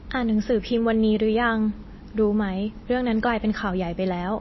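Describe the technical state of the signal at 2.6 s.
At 2.6 s the speech has the same damage as the rest of the clip, most likely MP3 compression at a low bitrate, around 24 kbps. The encoder has cut everything above 5.8 kHz and is zeroing weak frequency lines, so it sounds dull, watery and swirly.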